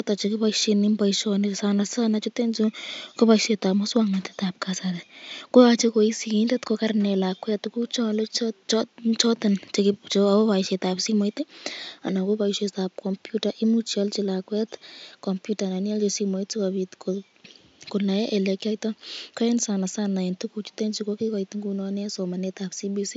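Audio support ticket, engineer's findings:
No system faults found in the speech signal; the only background is the room noise picked up by the microphone, sitting about 51 dB below the speech.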